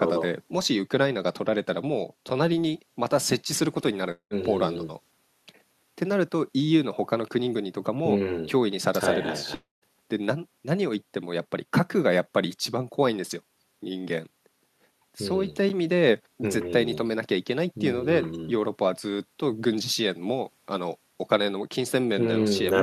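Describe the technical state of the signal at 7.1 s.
At 7.1 s the speech signal is intact, with no dropout, distortion, glitch or other technical fault present at that point.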